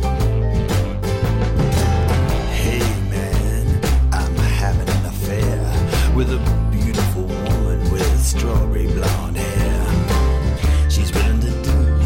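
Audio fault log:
No technical faults can be heard anywhere in the signal.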